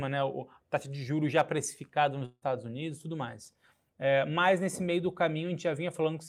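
Speech, with a long network dropout from 2.25 to 2.43 s, right after "de juros já precificada". The final sound stretches into a fading buzz for about 160 ms, then about 40 ms of silence before the speech resumes with roughly 160 ms of content gone. The cause is likely lost packets concealed by the receiver. On a spectrogram the harmonics freeze into flat, dimming horizontal bands, followed by a short blank gap. The waveform shows a decaying repetitive envelope, then near-zero amplitude.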